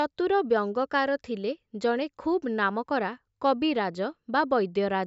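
No technical faults are audible in the speech.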